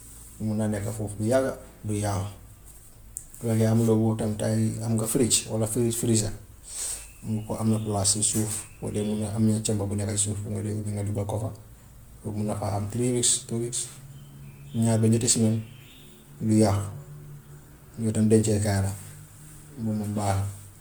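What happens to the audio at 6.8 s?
At 6.8 s the speech carries generation loss, present throughout: it was likely decoded and re-encoded as MP3 around seven times, each pass requantising on a shifted frame grid, so errors pile up and the sound turns swirly, hollow and smeared, with blurred attacks.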